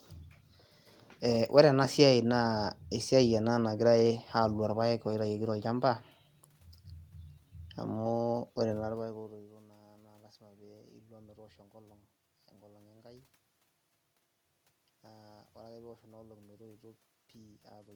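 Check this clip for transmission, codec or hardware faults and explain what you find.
Nothing in the clip points to a transmission, codec or hardware fault. The room's background noise is audible throughout, and around 8.5 s the talker's level shifts as if they moved relative to the microphone, both of which belong to the recording itself.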